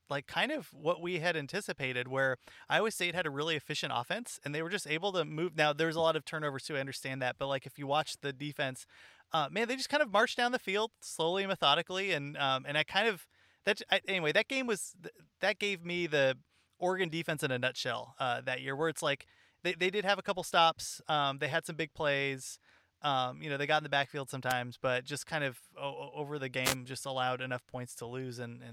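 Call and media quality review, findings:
Wireless microphone noise hit at 24.49 s (44 ms) and 26.63 s (124 ms). Brief static swish over the speech. Probable component: analogue FM radio link. Reflections cancel the carrier, the signal fades, and receiver noise surges into clicks.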